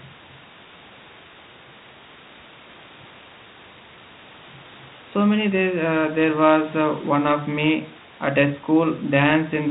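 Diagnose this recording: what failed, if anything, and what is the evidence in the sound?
Nothing in this recording points to a failure at any stage of the chain. Room noise sits about 25 dB below the speech, and the telephone-band coding heard here fits G.726 ADPCM at 32 kbit/s with only light codec damage, which is the normal result of that path.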